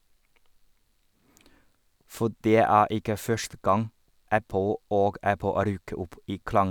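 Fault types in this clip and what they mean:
No faults can be heard.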